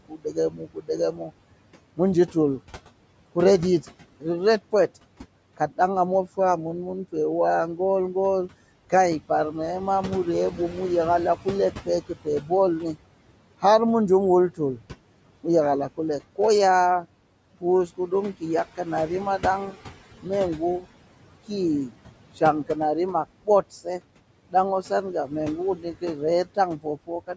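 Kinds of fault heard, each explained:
noise suppressor artifacts: The suppressor judges frame by frame which bands hold steady background and pulls them down by about 18 dB throughout. The room noise already sits about 16 dB below the speech, so the pauses drop toward near silence while the noise returns under each phrase. On a spectrogram the gaps between phrases turn almost blank. On the waveform the noise floor drops between phrases and rises with speech onsets.
speech cut by the noise suppressor: The suppressor mistakes some quiet speech for background and turns it down with the noise, so soft consonants and word endings sound swallowed. This happens from 0.08 to 7.79 s, with dips of up to about 19 dB over roughly a second in total. It happens again from 10.51 to 13.63 s, just after "mu rye", at up to about 15 dB for a few tenths of a second, and from 14.55 s to the end at up to about 18 dB for roughly a second. 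A spectrogram shows the faint high consonant energy and the trailing edges of words cut away early, and the waveform tails drop abruptly.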